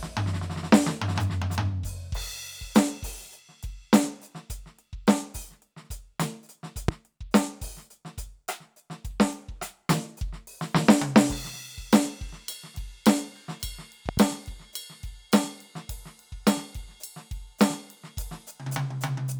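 A loud pop hits at 6.88 to 6.91 s, about 20 dB above the music. A double pop follows at 14.09 to 14.20 s. Both are likely voltage spikes.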